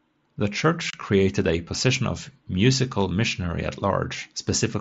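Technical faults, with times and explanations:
0.90–0.94 s, unconcealed Bluetooth headset packet loss: a 30 ms hole with abrupt edges cuts the speech just before "created a position of". Several short voice packets between headset and phone were lost over the mSBC link, and silence or an idle pattern filled their place.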